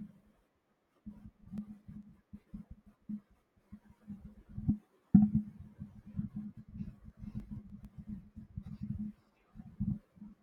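From 1.28 to 2.03 s and 6.95 to 7.85 s, CD scratch ticks: brief clicks of up to about 2 ms, roughly eight a second. Their regular spacing follows disc rotation, unlike random vinyl clicks.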